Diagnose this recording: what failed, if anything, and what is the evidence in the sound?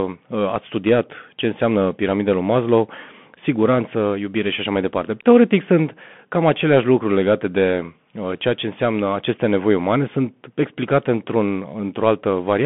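The fault sits at the codec stage: the speech runs through the Bluetooth CVSD headset codec for the whole clip. Nothing passes above 3.8 kHz and the band sits at roughly 150 Hz to 3.4 kHz. Slope-overload distortion roughens loud, bright passages, s sounds turn scratchy, and granular hiss lies underneath, which fits 64 kbps one-bit delta coding.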